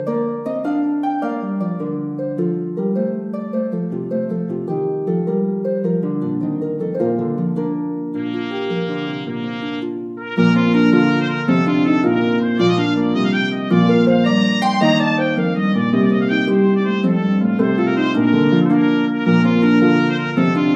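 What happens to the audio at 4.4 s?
Nothing goes wrong at 4.4 s; the audio runs on intact through that moment.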